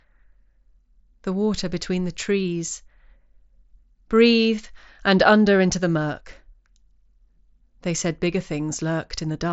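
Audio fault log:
Nothing stood out on listening to this speech clip.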